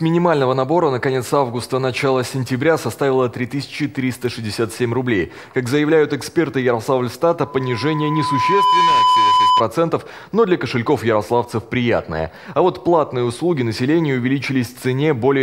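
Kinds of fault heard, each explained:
Loudspeaker feedback squeal: a microphone is picking up the loudspeaker it drives, and at one frequency the round-trip gain exceeds unity, so that component keeps reinforcing itself. From 7.43 s a pure tone at 1 kHz rises out of the sound, swelling over roughly a second and a half until it sits around 5 dB above the programme. It persists as a steady squeal until 9.63 s, when the loop is broken and it stops.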